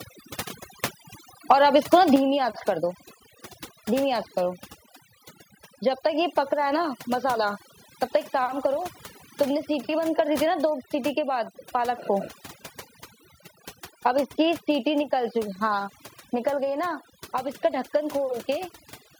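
A noise reduction stage set far too aggressively runs across the whole speech recording. It is overdone noise removal: any frequency band that sits close to the tool's noise estimate is pushed right down or switched off, and the softer parts of the voice are caught along with the noise. The background collapses into near silence scattered with twinkling, glassy specks, while the voice has its quieter detail hollowed out.

At 1.50 to 1.53 s and again at 1.93 to 1.95 s the loudest peaks carry a harsh, crackling edge with flattened tops. This sounds like microphone overload, with the input volume likely set so high that those peaks ran into the converter's ceiling, about 3 dB over at the first spot and about 2 dB over at the second. A few percent of the samples in the first burst are sheared off, and a somewhat larger share in the second, which gives each a short, gritty rasp.

At 2.16 s, just after the second distorted peak, voice and background both fall abruptly by about 6 dB in a single step. 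This is the pattern of the microphone volume being stepped down, as call software likely reacts to a too-hot input by cutting the device gain in one move. The drop is a clean, sudden change in level rather than a gradual fade.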